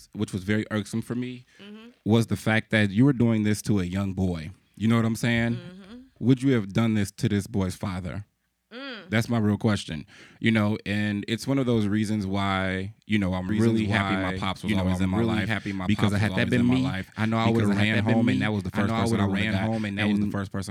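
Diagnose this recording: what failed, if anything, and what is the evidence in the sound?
A doubled audio track appears at 13.49 s, just after "reasons why you know", and runs to the end. A second full-band copy trails by about one and a half seconds, roughly 5 dB quieter. It starts abruptly, with no decay or room colour. The likely cause is a second, slower capture path mixed in.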